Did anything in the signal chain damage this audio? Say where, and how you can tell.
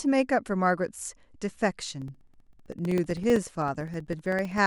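Yes, at the driver or buffer stage: periodic USB or driver dropouts from 2.02 s to 4.58 s, about forty ticks every 64 ms, each a couple of milliseconds of silence. Their strictly even spacing, unlike irregular network packet loss, points to a recurring bus or driver stall.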